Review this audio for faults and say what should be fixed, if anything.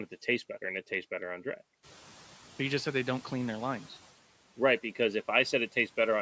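Noise suppressor catching up, from 1.83 to 3.88 s, just after "tastes better on draft": the room noise jumps by about 13 dB at around 2 s. The suppressor's noise estimate is still tuned to the quieter level, so the new noise passes through with little reduction. Over roughly 2.05 s the estimate adapts and the noise sinks by about 6 dB. To prevent this, make the suppressor's noise tracking faster at detecting and following sudden rises in background level.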